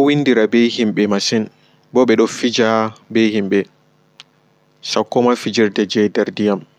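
Throughout, the resampler restarted on every block: each 20 ms block was converted from 48 kHz to 44.1 kHz on its own, so every block edge carries a small error. The speech picks up a 50 Hz buzz that sounds only while signal is present.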